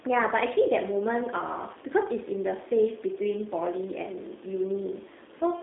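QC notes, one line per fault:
Throughout, G.729 codec: the speech is squeezed into a narrow line band of about 250 Hz to 3.6 kHz and has a plainly audible rough, synthetic edge, consistent with 8 kbit/s G.729A coding. The codec does not carry the waveform itself. It resynthesises each 10 ms frame from a vocal tract filter, a pitch predictor and a few pulses. That sparse excitation produces the buzzy, slightly artificial texture, and the missing upper band dulls the consonants.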